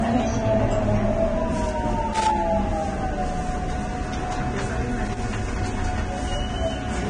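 Throughout the clip the sound is hissy and grainy, with nothing above 9.7 kHz, roughened tones and softened attacks. This is likely heavy Vorbis compression at a low bitrate, around 24 kbps. The encoder keeps a smooth spectral outline but quantises the upper detail so coarsely that it turns into noise of similar energy. That steady, signal-following graininess is what separates it from broadband hiss, which sits independently beneath the sound.

Loose connector crackle breaks in from 2.14 to 2.31 s and again from 5.05 to 5.32 s. Each burst is an irregular scratching spatter where a worn contact was making and breaking, chopping the signal on and off. Unlike the codec grain, it is confined to these short windows. Its uneven, ragged timing also distinguishes it from regular digital clicks or dropouts, which tend to be cleaner and more evenly spaced.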